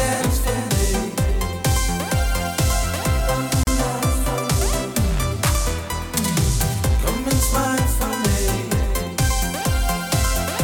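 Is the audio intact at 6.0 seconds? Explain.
Yes, the audio at 6.0 seconds plays through cleanly, with no dropout, click, distortion or other fault at that moment.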